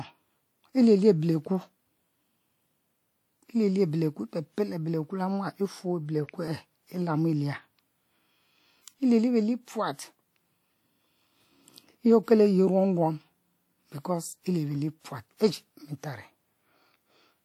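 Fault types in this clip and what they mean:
Audio missing between chunks: the speech jumps forward at 2.50, 6.48 and 14.44 s, losing a sliver of around 20 ms with no silence left behind, unlike a dropout. Their spacing in multiples of 4 s likely marks chunk boundaries.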